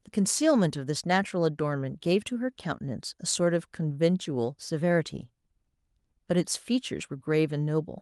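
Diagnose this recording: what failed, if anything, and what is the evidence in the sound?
Listening through the speech, nothing stood out as a failure at any stage of the chain.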